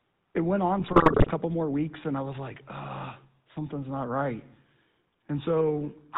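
A buzzy, gravelly roughness runs through the whole of this speech recording, with everything above 4 kHz missing. That is the GSM full-rate codec: it models the vocal tract and excites it with sparse, regularly spaced pulses, a coarseness that fits the 13 kbps full-rate coder and is plainly audible here. From 0.80 s to 1.31 s, between "it went on" and "more weeks", the voice breaks into squawks, pops and gargling. These are GSM bit errors: corrupted filter, pitch and gain values reach the decoder, distorting the spectrum and level frame by frame, consistent with an error rate of roughly 3%.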